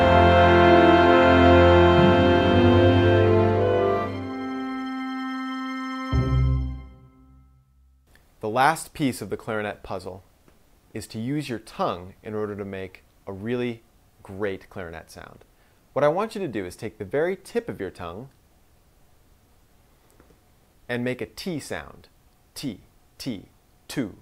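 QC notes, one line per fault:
Nothing stood out on listening.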